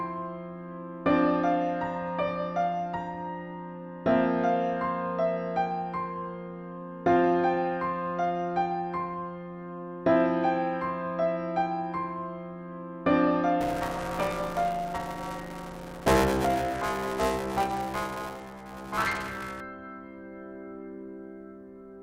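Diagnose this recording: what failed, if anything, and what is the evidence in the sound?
Buffer tearing from 13.61 to 19.61 s, at the driver or buffer stage. A 200 Hz robotic buzz rides on the sound, implying a 5 ms buffer period. Roughly a third of each period replays audio about 10 ms old, with hard joins either side.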